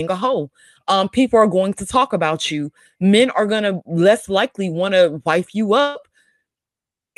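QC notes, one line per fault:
5.89–5.97 s, burst of packet loss after "want to wife you": the receiver extends and fades the last sound for about 57 ms, then resumes with roughly 60 ms missing.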